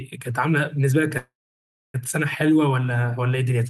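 At 1.17 s the speech hangs in a call audio freeze that lasts until about 1.96 s. The last bit of sound smears out into a short fading buzz or hiss, then it's dead quiet for around 0.64 s before the talker picks up exactly where they left off. Nothing gets skipped, so everything after runs about 0.77 s late. That's likely packets stalling in transit and the jitter buffer running dry.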